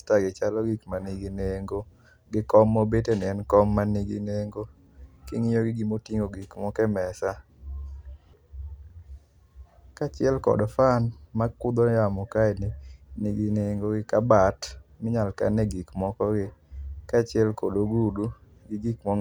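No technical faults can be heard anywhere in the speech recording; the signal stays intact and continuous throughout.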